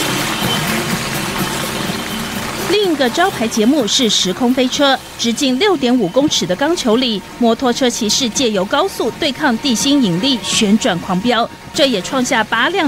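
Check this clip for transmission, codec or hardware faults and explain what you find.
Nothing in the clip stood out as a problem on listening.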